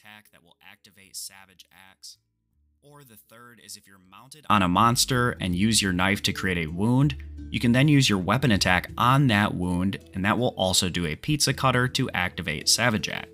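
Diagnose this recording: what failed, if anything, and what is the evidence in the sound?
From the start to 4.5 s the sound is faint, with the centre and low end nearly gone and the level down about 26 dB when summed to mono. The likely cause is one channel inverted in the analogue wiring, so material common to both channels cancels.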